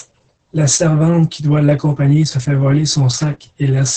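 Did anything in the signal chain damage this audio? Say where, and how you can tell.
Yes, at the codec stage: Opus voice compression damages the whole clip. Nothing survives above about 8.5 kHz, and the speech sounds hoarse and faintly robotic, which points to SILK coding near 10 kbps. A plain low-pass filter would dull the top without roughening the voice.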